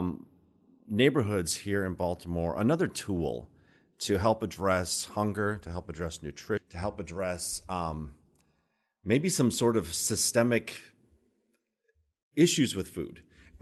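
At 6.57 s, right after "hunger to help address", playback lurches into "to help". This is a skip ahead. Roughly 0.7 s of speech was thrown away while later audio was already queued. Nothing fills the gap. The two sides butt straight together.

From 7.66 to 7.95 s comes a jitter buffer speed-up. The buffer had built up extra delay, so the receiver trimmed short pitch-period slices, about 70 ms in all. Speech runs at 118 percent with unchanged pitch and sounds briefly rushed. The Opus call path's top end stops near 12 kHz.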